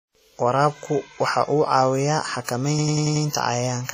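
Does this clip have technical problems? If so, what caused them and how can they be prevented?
Yes. WMA compression damage runs through the whole speech clip. The sound is heavily smeared and washy, with ringing and a hiss that rises and falls with the signal, and nothing above 15.2 kHz. The likely cause is a transform codec at a low bitrate, which fits about 32 kbps. Its long blocks spread quantisation noise across tens of milliseconds and zero out weaker spectral lines. Encoding at a higher bitrate, or keeping a lossless copy, prevents it.

A system hang loop runs from 2.79 s to 3.25 s. A single 92.88 ms slice repeats five times at 10.8 Hz, which produces a stutter. The machine or driver stalled while the audio hardware kept replaying its ring buffer, and the loop length fits a 4096-sample buffer. Essentially no audio is lost around the loop. Fixing the driver or system stall, and using a watchdog that mutes output when buffers stop refreshing, prevents it.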